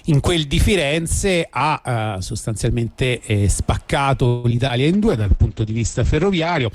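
From 4.27 to 4.71 s, repeated packet loss leaves choppy sound with pieces missing. Concealment stretches the last sound into each hole, the longest about 165 ms, so the waveform shows repeating, smeared segments and abrupt breaks.

At 4.94 s a call bitrate drop sets in and lasts to 6.73 s. The audio turns rough and muffled as the spectrogram's top edge collapses from 20 kHz to about 8 kHz, which points to a fall to roughly 11 kbps.

Between 4.97 and 5.64 s, a jitter buffer slow-down repeats pitch periods to add about 63 ms. Sounds drag at 92% speed without a pitch change, and the spectrogram shows harmonics drawn out in time at unchanged frequencies.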